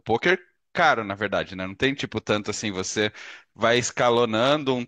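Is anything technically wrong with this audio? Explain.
No, nothing technically wrong can be heard in this speech recording. Nothing in it points to a problem in how the audio was captured, processed or played back.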